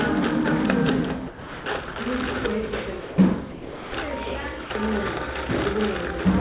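A recording of everyday sounds in which the sound gives way to steady comfort noise at 1.28–1.66 s, 1.94 s, 3.00–3.18 s, 3.52–3.92 s and 4.64–4.70 s, likely sound dropped by the voice detector treating it as background. The band stops near 4 kHz, which fits a G.711 A-law call path.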